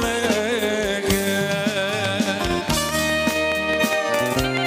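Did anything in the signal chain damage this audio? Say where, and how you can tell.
Yes. From 2.05 s to 4.58 s, a regular train of clicks ticks over the sound at 4.77 per second: about fifteen same-shaped pulses, roughly 15 dB above the signal. Such evenly paced injection likely comes from interference coupling into analogue wiring or a faulty connection or power supply.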